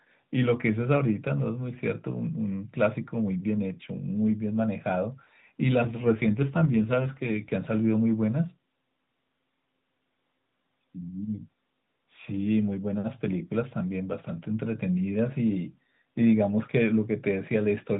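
Speech carried over the AMR narrowband mobile codec shows an AMR rate drop from 5.82 to 7.52 s. The voice turns rougher and more synthetic, consistent with a fall from 12.2 to about 5.9 kbps, yet the 4 kHz band stays unchanged and nothing drops out, unlike packet loss.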